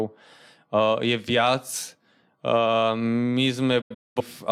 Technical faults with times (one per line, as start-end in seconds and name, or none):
3.81-4.22 digital broadcast dropout